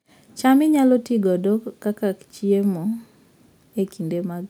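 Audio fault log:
No faults can be heard anywhere in the speech. Nothing in the recording calls for an entry in this log.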